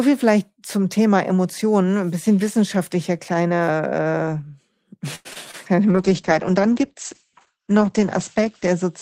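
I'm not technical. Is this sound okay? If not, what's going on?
No, not quite. From 5.15 to 5.55 s there's repeated packet loss, giving a robotic sound: four little chunks of audio went missing, the longest about a tenth of a second, and the call patched each hole by stretching the previous sound, so it comes out choppy.

Then at 5.89 s there's a call bitrate drop: the connection told the encoder to squeeze the audio into far less data. The sound gets coarser and loses its top end, going muffled, and it stays that way right through to the end.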